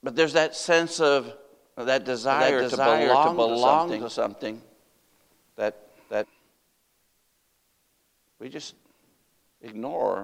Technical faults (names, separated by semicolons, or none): doubled audio track